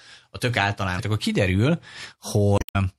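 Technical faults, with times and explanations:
Throughout, MP3 compression: the whole clip has a watery, swirly quality, with s sounds turning metallic and chirpy. That's likely an MP3 encode at a low rate, one that fits about 64 kbps, where the encoder runs out of bits and lets weak frequency lines blink on and off between frames, so the damage is plainly audible.
0.96 to 1.00 s and 2.55 to 2.76 s, damaged data in a compressed stream: two spots where the sound breaks up, the second one longer at about 0.2 s. Part of the compressed data there is corrupt, so the decoder can't read those frames, loses its place and hunts for the next valid frame header before carrying on.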